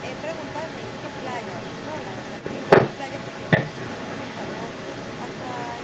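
From 0.0 s to the end, a second copy of the speech trails the original by about 262 ms, at roughly the same loudness. This is an echo leak. The far end's echo canceller likely let its loudspeaker pickup return down the line, within the 8 kHz call band.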